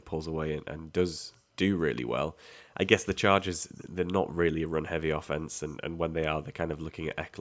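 At 1.32 s a faint, brief ghost of the speech surfaces, barely audible and far below the main voice, and at 1.96 s a second, clearer fragment follows, still well under the speech. Both are short copies trailing the original by about 396 ms. This is echo leak, likely from a far end playing the call over a loudspeaker, where the echo canceller let part of the returning voice slip through.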